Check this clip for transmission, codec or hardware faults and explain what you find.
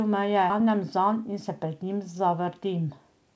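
Two faults stand out, both from the jitter buffer side of a call path whose G.722 coding at 64 kbps leaves nothing above 8 kHz.

At about 0.50 s there is a skip ahead. Roughly 0.7 s of audio was thrown away, either lost in transit or discarded when an overfull jitter buffer had later packets already queued, and playback resumes from the newer material. The two sides butt together with no silence and no filler. That distinguishes it from a dropout, which leaves a gap, and from packet-loss concealment, which would smear or repeat sound across the hole.

From 0.60 s to 2.20 s a jitter buffer speed-up follows. Having just caught a backlog, the receiver trims its excess delay by snipping out short pitch-period-sized pieces over and over, removing around a tenth of a second in total. The speech runs about 6% faster and sounds slightly hurried, yet its pitch is unchanged. A resampling or clock-rate error would raise the pitch along with the tempo, so the steady pitch sets this apart.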